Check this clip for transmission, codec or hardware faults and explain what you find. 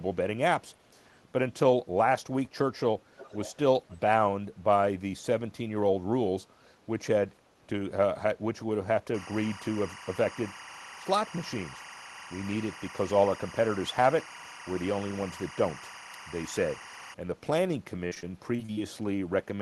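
Three kinds of fault turn up: an echo leak early on, timecode bleed through the middle, and a burst of repeated packet loss near the end.

Echo leak, 3.16 to 3.54 s and again 3.89 to 3.98 s. The far end was likely playing the call on a loudspeaker while its echo canceller failed to subtract everything the microphone caught, so that residue was sent back. A copy of the speech arrives 485 ms late, roughly 20 dB below the direct sound in the first stretch and about 30 dB down in the brief second scrap.

Timecode bleed, 9.14 to 17.14 s. Linear timecode on an adjacent track or cable has coupled into the audio path. Because the code is a square wave flipping between two frequencies, it comes through as a steady chirping warble alternating near 1 and 2 kHz, sitting roughly 15 dB under the speech for the full eight seconds. Its rhythm fits code running at 23.976 frames per second.

Repeated packet loss (robotic sound), 18.07 to 18.79 s. 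Packets went missing or arrived late several times in quick succession, and each hole was patched by stretching the preceding sound before the next gap hit. The result is choppy speech with fragments dropped. The longest single hole is about 47 ms, and around a fifth of that stretch is concealment rather than real signal. The Opus call path's top end stops near 12 kHz throughout.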